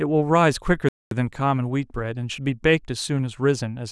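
A playback stall interrupts the speech at 0.89 s, cutting it off mid-flow into silence that lasts about 230 ms until 1.11 s, when the sound resumes. The likely cause is the player running short of buffered data or its output thread being blocked.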